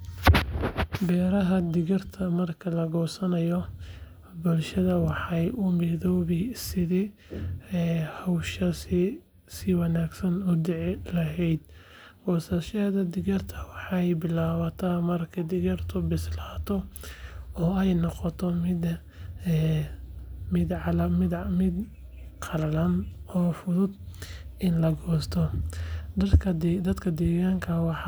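No technical faults are audible anywhere in the speech.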